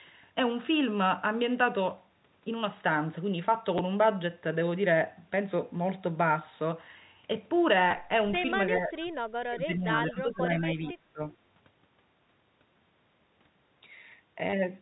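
Packet loss with last packet repeated at 3.78 s, and again from 7.91 to 7.93 s: lost audio was filled by replaying the previous packet, giving a small blip and then a brief robotic stutter, which fits 10 ms packets.

Echo leak from 8.74 to 8.79 s: a delayed copy of the sound returns about 0.4 s late, roughly 10 dB below the main level, likely from an echo canceller letting loudspeaker pickup through.

Speech suppressed in double talk from 8.77 to 8.96 s: the voice dips by around 10 dB for about 0.2 s, likely because the canceller turned everything down while both sides talked.

Echo leak again from 9.02 to 9.12 s and from 10.85 to 10.92 s: fainter echo fragments, about 25 dB down, arrive with the same 0.4 s delay.

Speech suppressed in double talk from 9.47 to 11.22 s: the voice drops by as much as about 25 dB over roughly 1.5 s.

Packet loss with last packet repeated from 14.5 to 14.53 s: a 30 ms gap is patched with repeats, producing a short buzzing stutter. 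Throughout, the band stops at 4 kHz, as expected of G.711 telephone coding.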